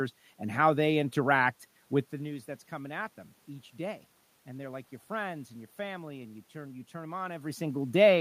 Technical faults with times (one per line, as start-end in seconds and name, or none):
none